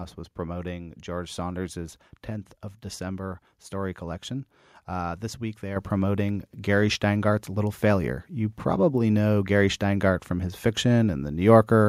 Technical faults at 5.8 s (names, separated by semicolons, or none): microphone volume stepped up